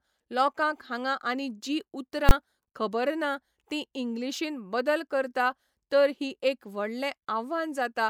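At 2.29 to 2.31 s the speech is hit by invalid numbers at full scale. A calculation returned infinite or undefined values, which were clamped to the maximum sample value for a 20 ms block. At that length the two edges merge into one loud bang.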